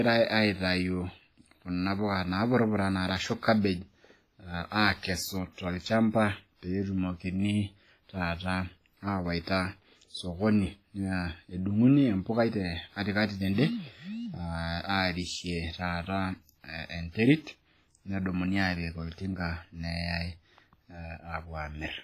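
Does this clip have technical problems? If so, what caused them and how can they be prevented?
Yes. WMA compression runs through the whole speech clip: the sound is ringing and washy, with a hiss that rises and falls with the signal and nothing above 15.4 kHz. This heavy damage is likely from a transform encoder at a low bitrate, fitting roughly 24 kbps, which zeroes weak spectral lines and smears quantisation noise across long blocks. To prevent it, encode at a higher bitrate or use a more modern codec.

Pre-echo appears at 9.44 to 9.47 s and 17.11 to 17.15 s. A brief hiss of about 31 ms and 38 ms precedes sharp attacks, because noise sized for the loud onset is spread across the whole block, including the quiet moment before it. To prevent it, use an encoder that switches to short blocks on transients, or raise the bitrate.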